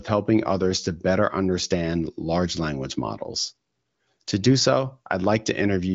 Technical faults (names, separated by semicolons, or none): none